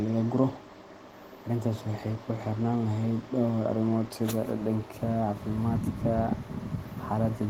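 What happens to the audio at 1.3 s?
Nothing goes wrong at 1.3 s; the speech there plays through intact, with no dropout, click or distortion.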